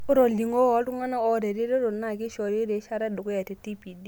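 No technical faults occur at any point in the recording, so there is nothing to describe in time order.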